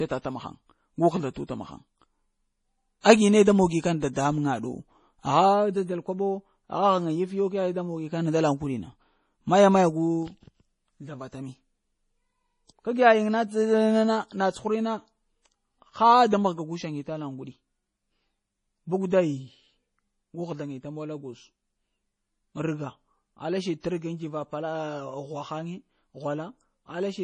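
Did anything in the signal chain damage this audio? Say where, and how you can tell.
Yes: the codec stage, likely heavy MP3 compression, which fits a 32 kbps bitrate. Throughout, the speech sounds watery, and the spectrogram shows nothing above 10.5 kHz.

Pre-echo, also from the codec, appears at 3.01 s, at 4.13 s just after "ne da moni kana", and at 23.80 s. A 33 to 41 ms smear of hiss precedes each attack in the waveform.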